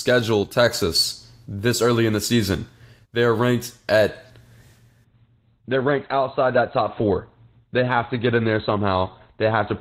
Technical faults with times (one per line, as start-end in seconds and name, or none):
5.04-9.80 adaptive stream at a lower bitrate